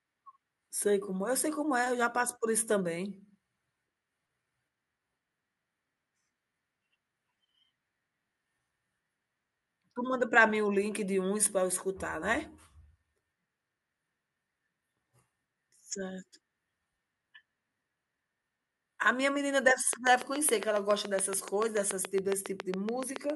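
Speech with a train of clicks from 19.93 to 23.31 s: about 30 regularly spaced pulses, 7.1 per second, peaking about 15 dB above the sound, likely interference. Their even pacing distinguishes them from random crackle.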